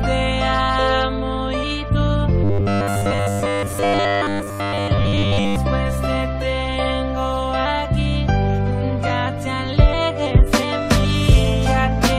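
Robotic sound from repeated short buffers, 2.44–5.56 s: a rigid 100 Hz buzz, likely a 10 ms slice looping over most of the audio.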